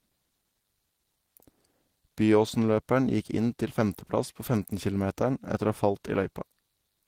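No technical faults can be heard anywhere in the speech recording, and the signal stays intact and continuous throughout.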